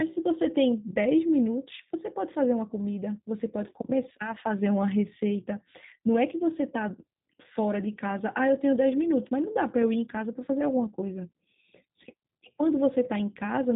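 Throughout, G.729 codec coding, which fits an 8 kbit/s VoIP link, leaves speech rough and synthetic, rebuilt from filter and pulses, with a spectrogram that goes blank above 3.8 kHz.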